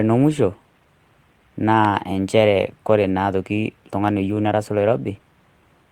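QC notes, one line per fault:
Nothing stood out on listening to this speech recording.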